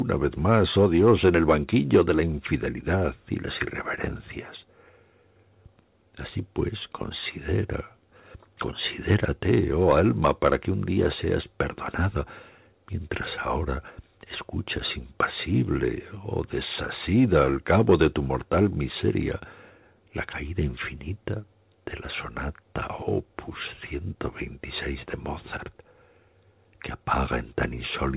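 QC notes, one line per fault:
Nothing to flag here; the audio just sounds like an ordinary call, with the narrow band stopping at 4 kHz, which fits a G.711 phone line.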